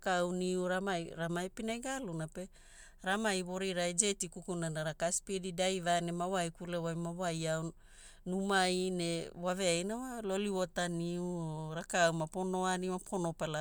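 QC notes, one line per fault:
Nothing to flag on this speech clip; I listened all the way through and didn't hear anything that needs a note.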